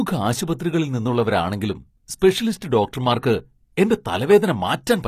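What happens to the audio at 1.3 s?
At 1.3 s, as across the whole clip, the treble sounds synthetic and lispy, with nothing above 14.9 kHz. That's likely HE-AAC compression rebuilding highs from copied lower bands, fitting about 24 kbps.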